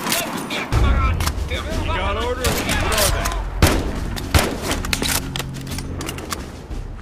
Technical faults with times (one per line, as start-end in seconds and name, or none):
none